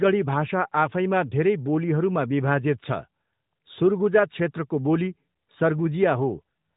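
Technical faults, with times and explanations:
Nothing in this speech clip counts as a technical fault, so there's nothing here to time or explain.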